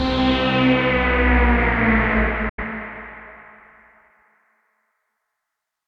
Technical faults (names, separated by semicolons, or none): digital broadcast dropout